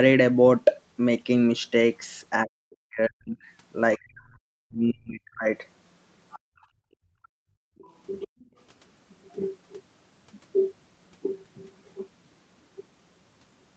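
From 2.45 to 3.43 s and again from 3.97 to 5.47 s, the speech sinks by as much as about 40 dB. This is speech suppressed in double talk, likely caused by the echo canceller turning everything down while both sides talked at once.

From 6.31 to 6.66 s a faint second voice, about 25 dB below the talker, comes through. From 6.39 to 7.48 s the room background drops away by up to about 40 dB and then returns. That is background gated by the echo canceller, which clamped the microphone hard while the loudspeaker was playing.

The other side's voice leaking through returns briefly at 7.23 to 7.28 s, about 35 dB down. Between 7.76 and 7.84 s the talker's speech is suppressed in double talk, a quick dip of about 25 dB. From 7.91 to 8.46 s the second voice is clearest, only about 15 dB below the speech, likely because the canceller left loudspeaker echo in the microphone signal. The background is gated again from 8.28 to 8.48 s.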